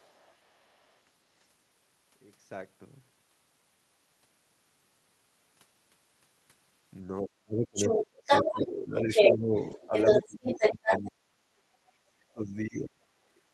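From 0.00 to 0.97 s a second voice sits faintly underneath, far below the talker: the other side's voice leaking through, likely because the loudspeaker echo was not fully cancelled from the microphone.

Between 7.21 and 11.49 s the talker's speech repeatedly sinks by as much as about 35 dB, around three seconds in all. This is speech suppressed in double talk, likely because the echo canceller turned everything down while both sides spoke at once. Meanwhile the far voice leaks through clearly, about 5 dB above the talker from 7.75 to 8.61 s and about 10 dB above from 8.99 to 11.08 s.

At 9.71 s and again at 10.63 s there is a brief 20 ms roughness with no gap. Each is a lost packet rebuilt from error correction, played from a coarser low-bitrate copy carried in the next packet.

At 11.87 to 11.92 s a faint scrap of the far voice leaks through again. From 12.15 to 13.01 s the talker is once more suppressed in double talk, dipping deeply for about 0.7 s.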